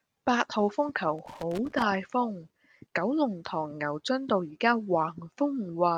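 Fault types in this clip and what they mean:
Loose connector crackle: a worn or dirty contact somewhere in the cable path kept making and breaking as it shifted, chopping the signal on and off, so from 1.19 to 1.82 s the speech is broken up by an irregular burst of scratchy crackle.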